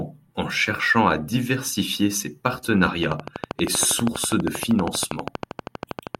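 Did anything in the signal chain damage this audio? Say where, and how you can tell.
Yes. A train of clicks runs from 3.03 s to 6.16 s: about forty evenly spaced pops at 12.5 per second, peaking roughly 15 dB above the speech and audible in pauses too. The regular pulse likely comes from interference in the analogue wiring or a faulty connection or power supply.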